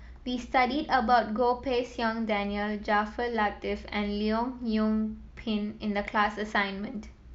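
No technical faults can be heard anywhere in this recording.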